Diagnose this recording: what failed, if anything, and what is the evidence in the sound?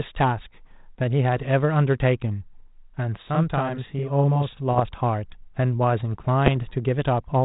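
Channel delay (doubling) at the buffer stage, 3.22 to 4.60 s: a same-level copy arrives about 42.7 ms late, fitting a 1024-sample buffer, heard as doubling rather than a decaying room echo.

Bit errors on an ADPCM link, in the 32 kbit/s G.726 transmission path, at 4.70 to 4.83 s and 6.46 to 6.62 s: pops and rough bursts ring on briefly as the decoder's adaptation recovers, unlike single clean clicks.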